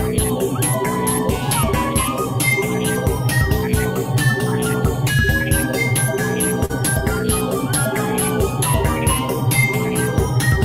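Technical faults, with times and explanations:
6.65–6.71 s, short concealed packet loss: about 40 ms of the stream failed to reach the decoder in time, and the receiver covered the gap by extending the preceding sound, carrying on its pitch where it was tonal or shaping noise where it was not, then crossfading back into the real signal. The invented 40 ms and the blend out of it come across as a brief smear or wobble, and a very short sound inside the gap can drop out entirely.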